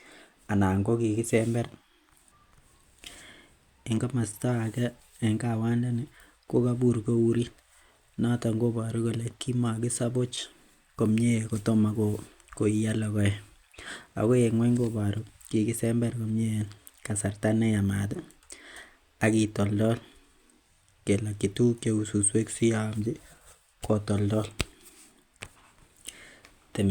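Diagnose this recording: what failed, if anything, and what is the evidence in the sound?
Nothing failed in this recording, and the sound carries no evidence of any fault.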